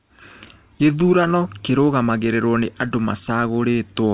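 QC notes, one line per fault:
Nothing stood out on listening to this speech, which comes through a G.711 mu-law call path at 64 kbps with nothing above 4 kHz.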